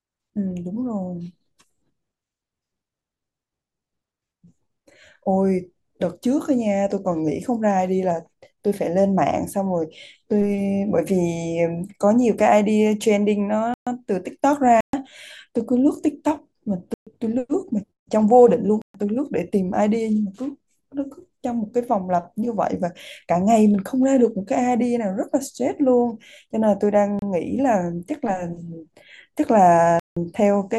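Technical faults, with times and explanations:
13.74 to 18.94 s, block of digital silence: the speech drops to silence for 128 ms at 13.74, 14.81, 16.94 and 18.82 s, leaving short holes, likely from output buffers not filled in time.
27.19 s, block of digital silence: a 29 ms gap.
30.0 to 30.17 s, block of digital silence: a 171 ms hole, which fits an 8192-sample block at 48 kHz.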